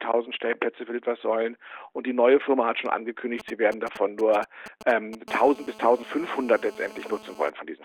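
From 3.40 s to 5.29 s you get GSM signalling bursts: a nearby 2G phone handshaking with its network, the audio circuit rectifying those radio pulses. It comes through as a galloping run of ticks and short buzzes at about 217 Hz, sitting maybe 15 dB under the sound.

At 5.29 s it settles into a steady GSM phone buzz running to 7.5 s, the phone now transmitting in steady bursts as in a call, pulsing at about 217 Hz. That's the hard, raspy, harmonic-heavy drone, about 21 dB below the sound and unrelated to it.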